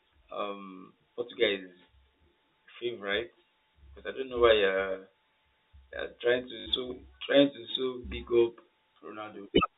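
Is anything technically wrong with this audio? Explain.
Yes. From 6.6 to 6.66 s there is packet loss with the last packet repeated: about 60 ms of audio went missing, which fits three lost 20 ms packets, and the receiver filled the gap by replaying the final good packet. The short run comes out as a brief robotic stutter with a buzz near 50 Hz. The G.711 telephone coding caps the bandwidth at 4 kHz.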